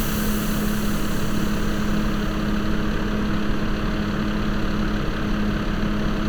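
Nothing stood out on listening to this recording of sounds.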